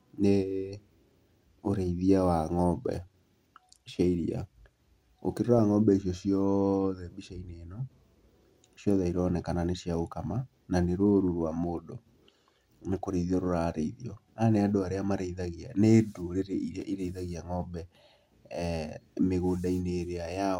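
At 5.58 s the speech breaks into a brief burst of DAB burbling. Bit errors have slipped past error correction into the MP2 data, so wrong samples put noise into single sub-bands. It sounds like short blips of noise. After "gũkama na nĩ rũũru", from 11.26 to 11.40 s, it returns as short noisy blips, which fits a handful of corrupted frames. Both bursts point to a low but real error rate from weak reception.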